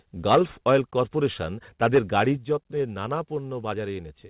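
At 0.30 to 0.39 s the loudest speech turns harsh and crackly, most likely microphone overload, with peaks driven about 7 dB past the converter's ceiling. On the waveform a noticeable share of samples sits flattened, and the spectrogram shows broadband splatter above the voice's harmonics. The same flat-topped crackle returns more mildly at 0.68 to 0.76 s (about 2 dB over) and again at 1.83 to 2.22 s (about 6 dB over, with fewer samples squared off), just before "যত্নের নানা".

At 0.35 s, in the middle of the first clipped burst, the level drops by about 2 dB in one step. This is likely the microphone volume being stepped down by the call software's gain control. It steps down again at 2.37 s, by about 5 dB, just before "যত্নের নানা", and at 3.39 s, by about 1 dB, just after it. Each appears as an abrupt shrink in the waveform envelope that affects speech and background noise alike. On the spectrogram it shows as a sudden dimming across all frequencies.

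Throughout the clip, the call path limits the sound to below 4 kHz, which fits G.711 mu-law at 64 kbps.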